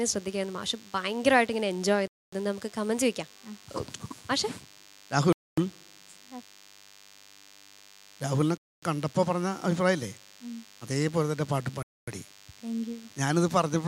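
DECT cordless phone buzz runs from start to finish. A nearby handset or base station fires a radio burst every 10 ms, and the audio circuitry rectifies it into a thin, steady 100 Hz buzz full of harmonics, sitting roughly 25 dB below the sound.

Gaps between chunks interrupt the audio at 2.08 to 2.33 s, 5.33 to 5.58 s, 8.58 to 8.83 s and 11.83 to 12.08 s. The audio was delivered in 3 s chunks with 250 ms of silence inserted at each join, producing short holes at regular intervals.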